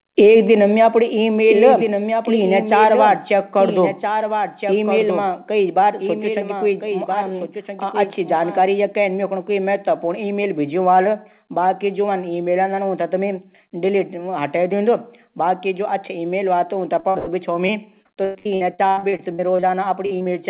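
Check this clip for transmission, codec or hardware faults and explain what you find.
You've got a few problems here, and they mostly pile up near the end. The band stops at 4 kHz throughout, which fits a G.711 telephone codec.

From 1.5 to 8.68 s there's a doubled audio track. A second full-band copy trails the original by about a second and a half and sits about 5 dB quieter, with no room colour. It likely comes from a second capture path or an editing slip, and it makes the sound overlap with itself.

There's short concealed packet loss at 17.00, 20.06, 20.19 and 20.22 s. Each time, roughly 20 to 40 ms never arrived, and the decoder papered over it by extending the last sound before blending back in. You hear it as a quick smear or wobble.

You'll also hear a burst of packet loss at 17.09 to 17.17 s and again at 17.19 to 17.29 s, losing about 60 and then 80 ms. The receiver stretched the last sound and faded it, so you get a held buzz or dying hiss and then a jump forward.

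From 17.67 to 19.64 s there's repeated packet loss, and it sounds robotic. Fourteen gaps, the longest 100 ms, are each patched by continuing the previous sound, and about 30% of that stretch is filler. It comes out choppy, with pieces missing.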